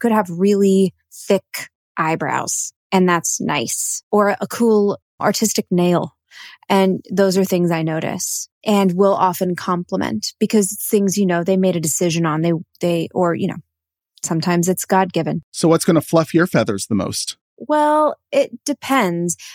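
Listening to the speech in this recording, nothing technically wrong stood out at any point.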